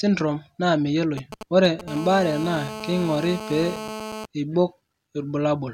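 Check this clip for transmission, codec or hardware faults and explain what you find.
Interference from a nearby 2G mobile phone appears twice in this speech recording, first as intermittent signalling bursts and then as a continuous buzz.

From 1.18 to 1.81 s there is a galloping dit-dit-dit of short 217 Hz buzzes, roughly 10 dB below the speech. These are GSM signalling bursts: the handset sends brief groups of radio pulses while setting up a call, and the audio circuitry rectifies them into sound.

From 1.88 to 4.26 s a hard, steady, harmonic-rich buzz at 217 Hz sits about 11 dB below the speech and ignores it entirely. This is GSM phone buzz: during the call the phone transmits in bursts at 217 Hz, and rectification of those pulses turns the repetition rate into an audible tone.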